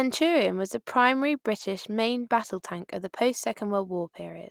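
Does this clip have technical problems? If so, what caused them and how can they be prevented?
Yes. At 1.59 to 1.61 s there's a lost packet rebuilt from error correction: a single missing packet, it seems, replaced by the low-bitrate copy in the next one, so there's no gap, just about 20 ms of rougher, noisier speech. Reducing packet loss with a steadier network path or jitter buffering prevents it.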